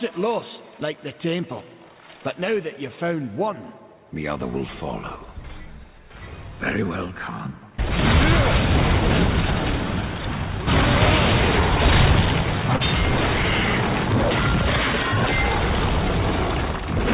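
Audio carried over a G.711 mu-law call path with nothing above 4 kHz shows a short stall from a late packet at 12.76 to 12.83 s. The jitter buffer ran empty, so the last sound was held for 38 ms and then continued from the same place. Unlike a dropout, nothing is skipped; the sound is stretched and everything after it arrives 38 ms later.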